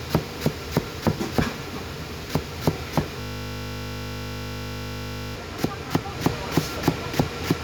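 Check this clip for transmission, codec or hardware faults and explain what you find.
One fault is present: a system hang loop from 3.21 s to 5.36 s. The computer or its audio driver stopped delivering fresh data while the sound hardware kept replaying the last 20 ms still sitting in its ring buffer. That fragment repeats exactly, around 107 times, at a rate of 50 Hz. Because the looped piece is so short, the sound collapses into a steady, pitched 50 Hz buzz instead of a stutter, and normal audio returns only when the system recovers.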